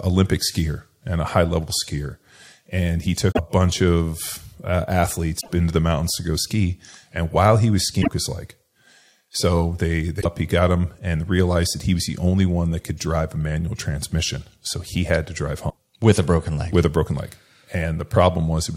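Brief glitches hit at 3.28, 5.37, 7.98, 10.18 and 15.66 s, each about a tenth of a second: damaged data in a compressed stream, with the decoder misreading corrupted frames and losing sync.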